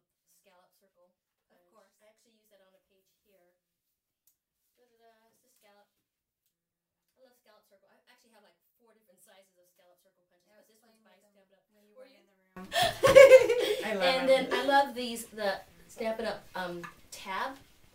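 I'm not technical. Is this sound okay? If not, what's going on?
No. From the start to 12.57 s, the sound almost disappears, most likely from one channel inverted: one side of a stereo recording was flipped upside down, so when both sides were combined into one, they cancelled each other, leaving only a faint leftover.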